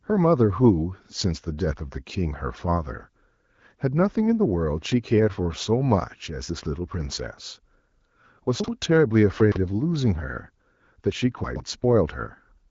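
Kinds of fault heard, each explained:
Chunks out of order, at 8.6–8.68 s, 9.4–9.56 s and 11.44–11.6 s: a 40 ms chunk plays late, after the next chunk first, then after three chunks twice. Nothing is lost, but the speech briefly jumbles at the hard joins.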